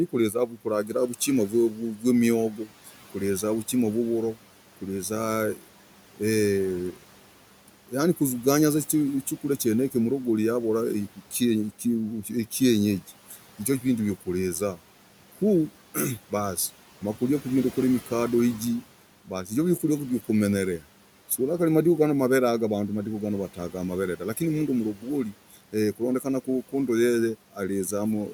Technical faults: speech cut by the noise suppressor

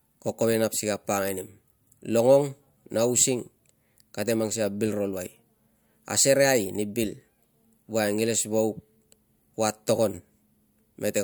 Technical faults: none

